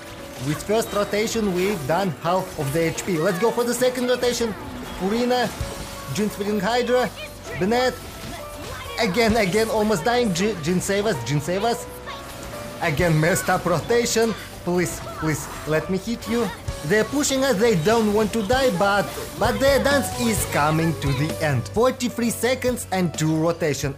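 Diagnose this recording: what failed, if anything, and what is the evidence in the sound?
Between 9.93 and 12.14 s the top end dulls and loses air, a slight softening rather than an obvious hollowness. This is channel delay (comb filtering) at the driver or buffer stage. One channel runs late by roughly a single sample, about 0.02 ms, and when the two are summed to mono the shared content cancels at evenly spaced frequencies. With so short an offset the first notch sits near 20 kHz, so only the extreme treble is cut.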